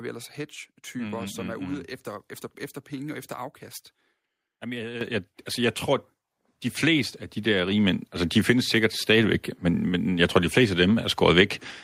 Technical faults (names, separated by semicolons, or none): microphone volume stepped up